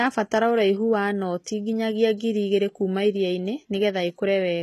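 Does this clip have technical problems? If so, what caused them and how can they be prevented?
Yes. Throughout the speech, s sounds are gritty and metallic and nothing reaches above 12.3 kHz. This is likely HE-AAC compression at a very low bitrate, around 16 kbps, rebuilding the treble by copying lower bands upward. Prevent it by encoding at a higher bitrate or with standard AAC.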